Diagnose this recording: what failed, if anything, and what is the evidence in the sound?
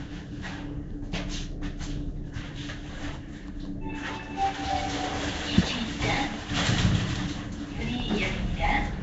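The codec stage failed: the audio was likely passed through Nellymoser compression, the old Flash microphone codec. Throughout the clip, nothing remains above 7.7 kHz, and a rough, hissy halo sits around the sound with a smeared, underwater character. The codec spends a fixed, small bit budget on short blocks, so bands too weak to earn bits are replaced with noise. The damage is plainly audible and points to a rate around 32 kbps.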